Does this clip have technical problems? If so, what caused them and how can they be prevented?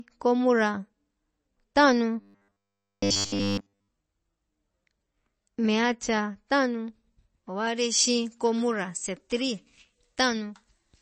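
Yes. MP3 compression damage is plainly audible throughout. Weak frequency components flicker on and off between frames, giving a watery, swirly texture with smeared attacks and dulled treble. This is likely the result of encoding at a very low bitrate, around 32 kbps. To prevent it, encode at a higher bitrate or use a lossless format.

From 2.20 to 3.88 s there is a robotic sound from repeated short buffers. A rigid metallic buzz at 100 Hz replaces the natural sound, which fits a buffer of about 10 ms being replayed over and over while fresh audio is skipped. The likely cause is new audio arriving too late for playback or capture. Larger buffers, steadier scheduling or a faster audio path would prevent it.

From 7.67 s to the end, the sound has pre-emphasis left on. An FM-style 75 µs treble boost was applied without the matching de-emphasis, leaving high frequencies about 14 dB too strong at 10 kHz relative to 1 kHz, so the audio sounds thin, bright and sibilant. 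Applying the matching 75 µs de-emphasis on playback or capture prevents this.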